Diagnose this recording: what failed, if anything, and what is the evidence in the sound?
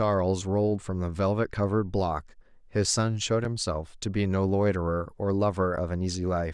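The driver's buffer went unfilled, leaving a block of digital silence at 3.45 s; the 5.3 ms hole, fitting a 128-sample buffer, sounds as a tick.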